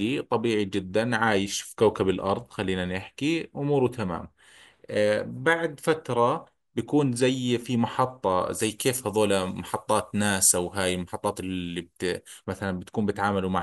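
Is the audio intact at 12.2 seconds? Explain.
No. From 8.62 to 12.44 s the speech has pre-emphasis left on: the treble was lifted with a standard 75 µs FM curve, and the matching de-emphasis was never applied. Highs sit about 14 dB above 1 kHz by 10 kHz, so the sound turns thin, bright and hissy, with sharp sibilants. Unlike a high-pass filter, the low end is still present. The lift rises steadily from around 2 kHz, as that curve's shape does.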